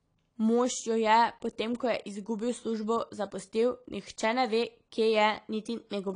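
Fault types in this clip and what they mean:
AAC compression: Nothing comes through above 10.1 kHz, so the speech sounds dull, and there's an obvious warbly, fizzy smear on the sibilants and held vowels. That's likely a low-bitrate AAC-LC encode, and the damage fits something around 32 kbps.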